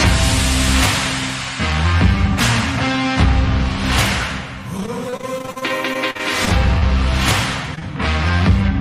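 From 4.77 to 6.83 s there is repeated packet loss, giving a robotic sound. Data arrived late or not at all 18 times. Each hole was patched by stretching the last sound, the longest over 46 ms. About a sixth of the stretch is filled-in. It sounds choppy, with pieces missing.

Two short concealed packet losses follow back to back, at 7.75 to 7.79 s and 7.79 to 7.83 s. About 20 ms went missing each time. The receiver continued the previous sound and blended back in, heard as a quick smear or wobble.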